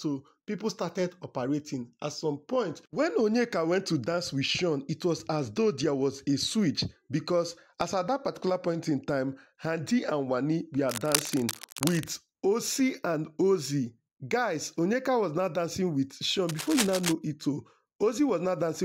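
Cable scratch noise cuts across the audio from 10.89 to 12.04 s and from 16.48 to 17.12 s. Dense, uneven scratching sits only slightly below the sound, likely from a worn cable or connector being moved.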